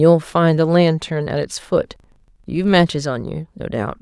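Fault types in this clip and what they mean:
Filter restarted on every block: from 1.92 to 3.34 s the speech carries a low buzz at 25 Hz, meaning a processing filter loses its memory every 40 ms and begins each block from silence, leaving a small transient at every boundary. What separates it from random clicks or dropouts is its strict regularity, and the ticks grow and shrink with the loudness of the speech rather than sitting at a fixed level.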